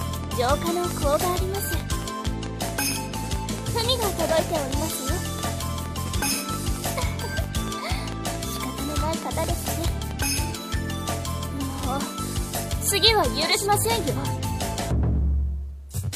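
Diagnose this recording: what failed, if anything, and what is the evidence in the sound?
Regular ticking, about 4.5 clicks per second, runs from 0.01 to 10.1 s, roughly fifty, well above the sound: a train of clicks, likely interference pickup in the analogue wiring.

From 11.59 to 13.76 s, hiss rises, with a 314 ms cross-fade and about 1 dB drop: digital radio blending to analogue FM.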